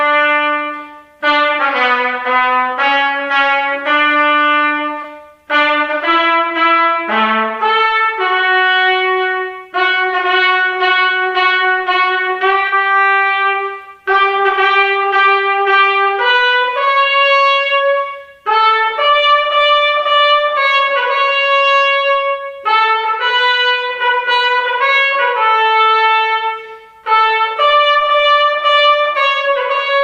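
AAC frame loss with concealment occurs at 5.02 to 5.05 s and 12.68 to 12.73 s. The decoder patched the missing frames from the preceding spectrum, leaving brief smeared, noisy gaps.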